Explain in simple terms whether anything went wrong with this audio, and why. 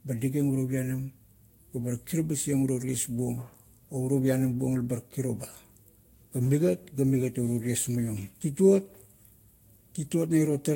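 Yes. The speech has a swirly, smeared, hollow quality from start to finish. The starts of sounds are blurred rather than crisp. Nothing is heard above about 16.6 kHz. This is generation loss. The likely cause is that the audio was squeezed with a lossy Vorbis codec, unpacked, and squeezed again, about four times in a row. Each round throws away detail in a slightly different place. So the damage piles up.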